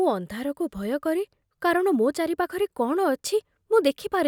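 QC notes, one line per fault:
No faults found in the speech; nothing to log.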